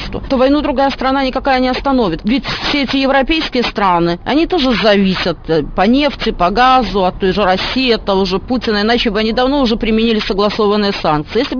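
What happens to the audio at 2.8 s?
At 2.8 s, as across the whole clip, aliasing: content above a 5.5 kHz fold was not filtered before a rate drop to about 11 kHz, so highs reflect back as gritty, metallic tones.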